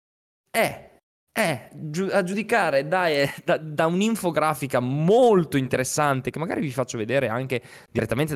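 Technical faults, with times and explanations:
2.32 s, 5.74 s and 7.98 s: damaged data in a compressed stream. Each is a brief blip lasting about 18 ms. Corrupted bytes made the decoder misread those frames and lose sync. It then found the next frame header and carried on.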